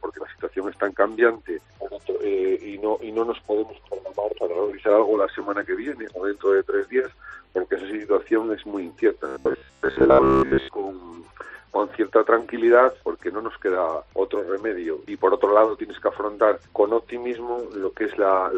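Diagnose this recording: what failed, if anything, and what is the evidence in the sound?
From 9.28 s to 10.68 s the sound turns into a rigid, metallic buzz at about 66.7 Hz while still loosely tracking the underlying audio: robotic sound from repeated short buffers. The buzz pitch implies a repeat period of about 15 ms, and roughly 70% of that stretch seems to be filled with repeats rather than new material. The likely cause is a driver or buffer underrun, where audio arrives too slowly and the last short block is looped to fill the gap, skipping the real signal.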